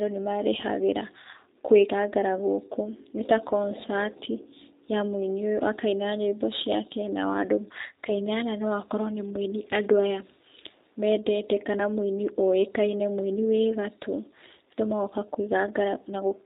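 Throughout the speech, the G.729 codec damage is plainly audible. The low-bitrate, fits-8 kbit/s reconstruction from a vocal tract filter and sparse pulses leaves the voice rough and synthetic. On a spectrogram, energy stops sharply at 4 kHz, with an empty band above.

From 3.48 to 3.53 s, VoIP packet loss concealed by the speech codec fills a 20 ms gap, which fits one lost packet. The decoder extends its last pitch and filter, giving a brief buzzy tone or coloured noise that fades. The waveform shows repeated periods shrinking in amplitude, then a weak or distorted recovery.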